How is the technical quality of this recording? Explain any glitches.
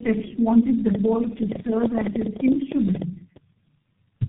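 The recording has two clear faults: degradation from repeated speech coding across the whole clip, and a burst of clicks in the middle.

Tandem speech coding runs throughout. The call appears to have passed through three low-rate speech coders in sequence, a chain that fits G.729A twice and then G.723.1. Each coder re-encoded the previous coder's damaged output, so the errors accumulated. The speech sounds rough, muffled and warbly, with nothing above 3.8 kHz.

A train of clicks runs from 0.95 to 3.37 s. About twenty sharp pulses arrive at roughly 9 per second, spaced unevenly and peaking about 15 dB above the speech. The likely source is electrical interference or a faulty connection or power supply. It is heard as a ragged ticking over the speech and the pauses.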